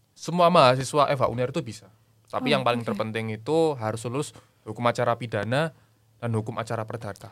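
A sudden voltage step, likely from a plug, switch, static discharge or driver glitch, entered the signal chain twice and was shaped by the circuits downstream into a short pulse. Each is a loud pop, from 0.81 to 0.84 s and again from 5.43 to 5.47 s. Each is a single sharp crack of under 40 ms, peaking roughly 10 dB above the speech, which continues uninterrupted beneath it.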